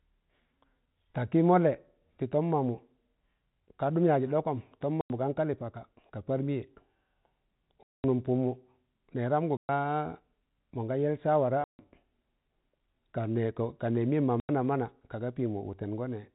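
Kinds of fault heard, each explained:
Packet loss filled with silence: five dead-silent holes of 90 to 210 ms, fitting 30 ms packets, with hard edges rather than concealment's smoothed repeats.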